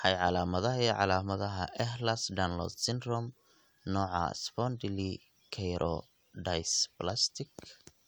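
No dropouts, distortion or other technical faults can be heard anywhere in the recording, and the signal stays steady and intact throughout.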